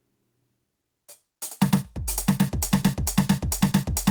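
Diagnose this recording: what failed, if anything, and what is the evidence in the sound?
The music breaks into a broken-record loop at 2.62 s: the same fragment of about 0.45 s repeats exactly, back to back, until the clip ends. Each repeat is identical, so this isn't the performance. Whatever should have played after 2.62 s is simply gone. The likely cause is a stall somewhere in the playback or streaming chain. The player, encoder or stream stopped getting new audio and kept re-sending the last block it had buffered.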